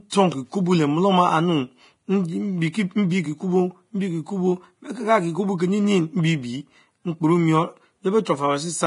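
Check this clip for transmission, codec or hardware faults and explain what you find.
Two faults are present: heavy codec damage throughout, and a brief pre-echo near the end.

Throughout the speech, everything above 10.5 kHz is missing and the upper band is hissy and grainy, with consonants and attacks blurred. This is likely Vorbis compression at a low bitrate, around 30 kbps. The codec coarsely quantises the residue above its smooth spectral floor, so treble detail turns into noise of similar energy. On a spectrogram there is a flat ceiling at 10.5 kHz and a speckled, mottled texture below it.

At 8.25 s, right after "mbiebie mkporemon", there is pre-echo. A short hiss leads a sharp onset by about 15 ms, and the attack itself sounds soft. Quantisation noise sized for the loud part of the transform block spreads back across the quiet moment before it. The waveform shows a low, fuzzy smear just ahead of the transient. 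The spectrogram shows a thin broadband wash preceding the onset.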